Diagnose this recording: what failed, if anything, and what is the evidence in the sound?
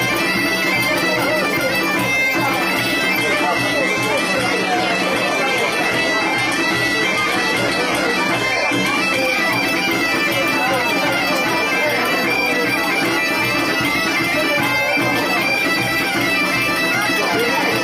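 Network stage: adaptive stream at a lower bitrate, 3.18 to 9.18 s, after the connection slowed. The spectrogram abruptly loses everything above 12.3 kHz, with no waveform gap.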